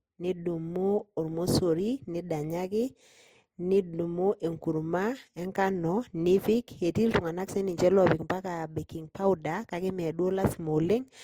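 Throughout the speech, two layers of lossy coding artefacts are audible together, one codec's artefacts heard on top of the other's. This is likely transcoding between lossy codecs, consistent with roughly 59 kbit/s MP3 followed by 32 kbit/s Opus. A spectrogram shows patchy, blocky upper bands ending at 20.2 kHz.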